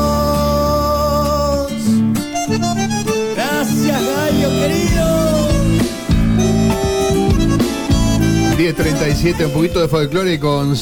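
No technical fault can be heard anywhere in the audio, and the signal holds steady throughout without any break, distortion or level problem.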